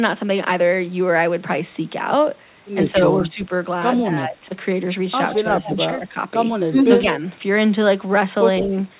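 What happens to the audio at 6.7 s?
At 6.7 s the echo canceller likely mistook a moment of both sides talking at once for loudspeaker echo and turned the near-end talker down along with it, a case of speech suppressed in double talk. From 6.7 to 6.77 s the speech level sinks by roughly 15 dB, so for about 70 ms the talker briefly dips before returning to full level.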